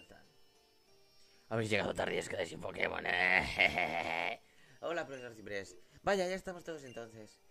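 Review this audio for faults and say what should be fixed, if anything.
No faults are audible, so nothing needs fixing.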